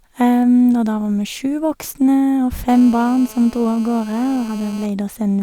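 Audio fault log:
2.69–4.86 s, GSM phone buzz: A 2G handset close to the recording chain is transmitting continuously during a call. It sends a radio burst every 4.6 ms or so, and some unshielded stage in the audio path demodulates that envelope. The result is a harsh, rasping buzz at 217 Hz, dense with harmonics, sitting about 22 dB below the speech. It runs steadily for just over two seconds and bears no relation to what is being said.
4.89–5.38 s, GSM signalling bursts: The same phone stays on the call but drops to intermittent transmission because its user has gone quiet, so it radiates only brief clusters of bursts at the same 217 Hz rate. The audio circuitry again rectifies each cluster, which comes through as even ticks with a longer buzz twice a second. These are faint, roughly 30 dB under the speech, and last about half a second.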